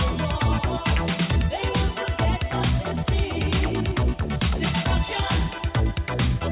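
No technical faults are audible.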